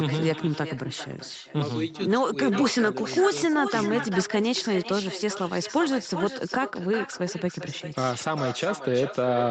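Throughout, echo with no canceller returns every phrase as a discrete copy about 10 dB quieter, about 0.4 s later, from a far-end loudspeaker reaching its microphone, unlike room reverb's continuous smear.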